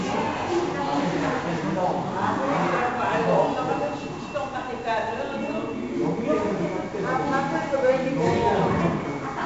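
From start to finish the audio carries 4-bit ADPCM compression, heavily applied. Each sample is coded as a coarse 4-bit step from a predicted value, so the quantisation error becomes broadband noise riding on the signal level: loud passages gain a gritty hiss, and sharp attacks distort where the adaptive step lags behind. Nothing is present above 7.7 kHz, giving a dull top end that points to a sample rate near 16 kHz and fits a 64 kbps stream.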